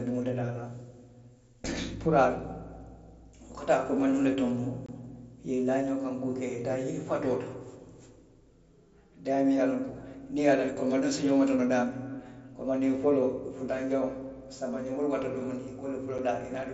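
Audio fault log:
4.86–4.89 s and 16.18 s: unconcealed Bluetooth headset packet loss. The speech cuts out for 22.5 ms, then 7.5 ms. Nothing fills the gaps, so each hole has abrupt edges. The lengths fit three lost 7.5 ms packets, then one.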